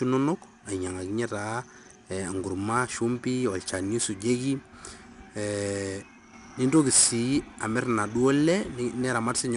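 Speech recorded with 4-bit ADPCM compression running the whole way through, and the damage is plainly audible. Each sample is coded as a coarse 4-bit step from a prediction, so a gritty hiss rides along with every loud stretch and rough edges appear on sharp onsets where the step size can't catch up. Nothing reaches above 10.6 kHz, which fits a sample rate around 22 kHz and explains the dull top end.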